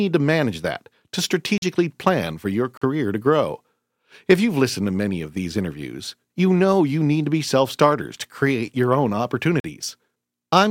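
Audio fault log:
1.58–1.62 s, 2.77–2.82 s and 9.60–9.64 s, block of digital silence: the output buffer likely went unfilled and was zeroed for about 43 ms each time, which fits a 2048-sample block, so the speech drops to dead silence after "to manage that to", "plan for your" and "to create your own", cutting out and back with no fade.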